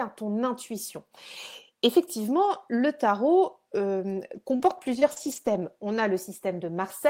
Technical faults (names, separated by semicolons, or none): scattered short gaps